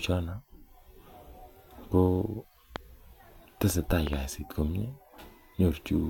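Speech clip with two loud pops: a single sharp one at 2.76 to 2.78 s, standing well above the speech, and a quick double pop from 4.07 to 4.15 s. Unlike a dropout or clipping, the speech carries on intact underneath, which points to a likely electrical transient such as a switch or static discharge.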